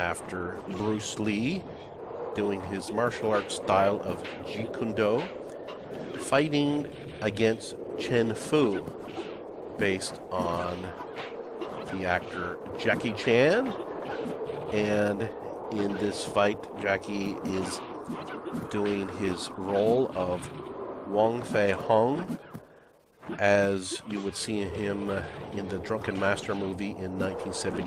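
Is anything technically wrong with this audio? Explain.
No, no technical faults present.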